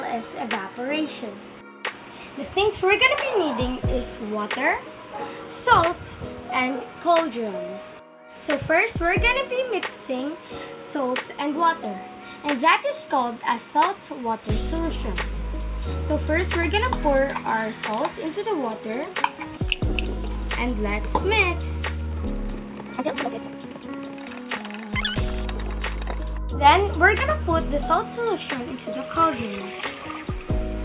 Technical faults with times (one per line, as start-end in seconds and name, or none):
none